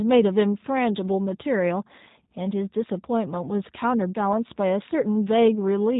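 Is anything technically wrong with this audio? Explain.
Yes. G.729 codec damage runs throughout the speech and is plainly audible. Each 10 ms frame is rebuilt from a vocal tract filter, pitch predictor and a few pulses, which fits an 8 kbit/s stream, so speech sounds rough and synthetic, with nothing above 3.8 kHz. Plain band-limiting would only dull it, without this buzzy, rebuilt texture.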